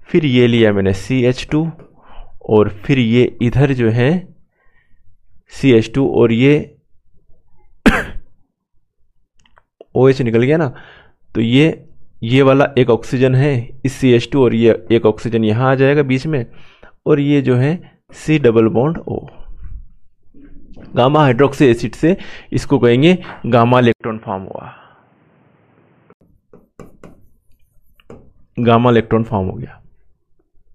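An input switched to a poorer device from 23.92 s to 26.21 s. After a brief gap of about 80 ms, the sound turns dull and boxy, with nothing above 3.3 kHz, drops roughly 10 dB in level, and gains a new background noise floor sitting around 30 dB below the signal, before returning to full bandwidth. The likely cause is the system changing its input mid-recording to a narrower-band microphone or a headset's call profile.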